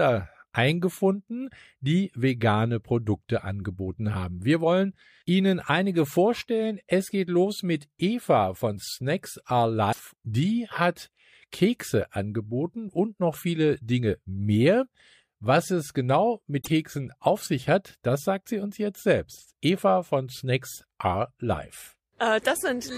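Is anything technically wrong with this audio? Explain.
Yes. The speech is broken twice by short glitches, from 9.89 to 10.00 s and from 16.58 to 16.68 s, each lasting about a tenth of a second. This is damaged data in a compressed stream. Some bytes in the encoded file are corrupted, so the decoder misreads or rejects the affected frames, loses its place in the stream, and produces a brief disruption while it searches for the next valid frame header.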